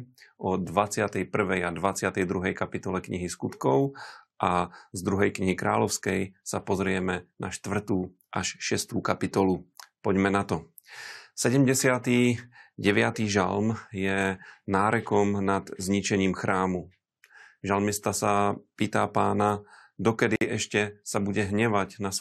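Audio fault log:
20.36–20.41 s, gap at a join of encoded pieces: the speech drops out for about 54 ms, with smeared edges, and then picks up right where it stopped. Two separately encoded sections were butted together without trimming the encoder's leading delay or last-frame padding.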